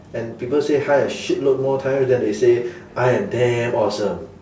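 The clip is a short recording of speech. No technical fault can be heard anywhere in it.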